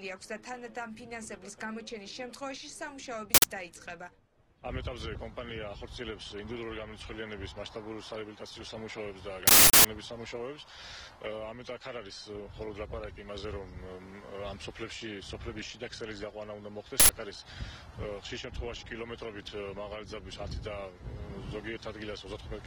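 At 3.34, 9.47 and 17.00 s, an uninitialised buffer plays leftover memory as loud digital-noise bursts of 93, 370 and 93 ms, which fits 4096- and 16384-sample blocks.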